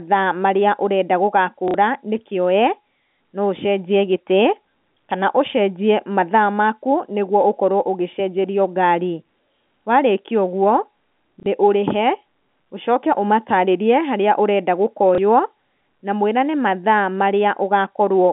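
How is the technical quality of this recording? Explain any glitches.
The speech comes through a G.711 A-law telephone path, band-limited to roughly 150 Hz to 3.5 kHz, and has three short dropouts.

Packet loss with last packet repeated occurs at 1.68 to 1.74 s, 11.4 to 11.46 s, and 15.15 to 15.18 s. When audio packets fail to arrive, the receiver replays the most recent packet to fill the hole. The 60 ms gaps point to two lost packets, and the 30 ms gap points to one, which fits 30 ms packets. Each replay is spliced in without regard to the voice's pitch. The two-packet gaps also buzz at about 33 Hz, heard as a brief robotic stutter.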